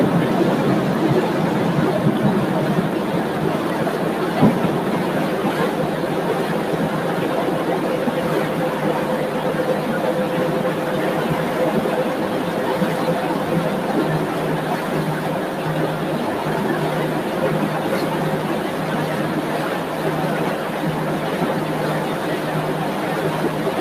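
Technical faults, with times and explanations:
No technical faults can be heard anywhere in this recording.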